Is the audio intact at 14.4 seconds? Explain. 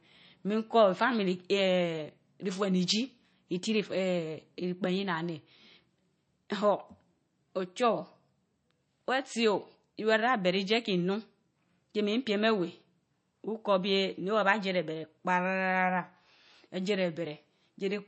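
No. At 14.4 seconds, as across the whole clip, the damage points to MP3 compression, likely at a starved bitrate near 33 kbps. Short of bits, the encoder has discarded everything above 8.3 kHz and zeroed weaker frequency lines that flicker on and off between frames. The speech sounds dull and plainly watery, with swirling, metallic chirps on s sounds and softened, smeared consonant attacks.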